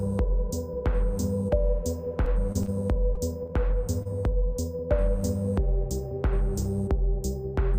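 From 2.26 to 2.69 s there is repeated packet loss, giving a robotic sound. Four separate holes, none longer than 20 ms, were each patched by extending the preceding sound, so about 13% of this stretch is synthetic. The rapid succession of patches gives a choppy texture with pieces missing rather than one isolated blemish.

Short concealed packet loss follows at 3.15–3.18 s, 3.46–3.50 s and 4.89–4.92 s. Each time roughly 20 ms of audio never arrived, and the receiver bridged the gap with a continuation of the last sound before blending back in. These register as brief smears or wobbles where a sliver of sound is actually lost.

At 4.02–4.07 s there is a short stall from a late packet. The jitter buffer ran dry, the last sound was stretched by about 30 ms until the packet turned up, and playback resumed where it left off. Unlike the losses, nothing is missing here. The sound is simply held slightly too long, with a faint buzz or dip.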